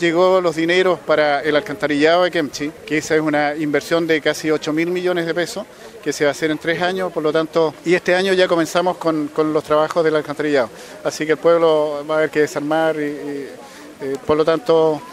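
Nothing technically wrong can be heard in this audio clip. No dropout, distortion or other disturbance appears at any point, so there are no times or causes to report.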